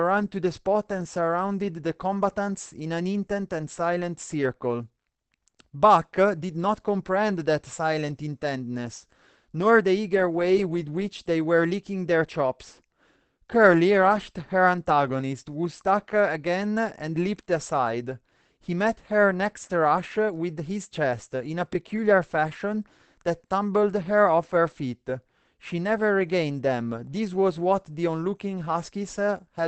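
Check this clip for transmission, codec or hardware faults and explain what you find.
There is one codec fault, present throughout the clip. From start to finish the speech sounds muffled and hoarse, with plainly audible codec damage and nothing above 8.7 kHz. This is likely Opus compression at a low bitrate, which fits about 16 kbps. At that rate the encoder switches to its SILK speech mode at wideband bandwidth, which removes the upper spectrum and roughens the speech.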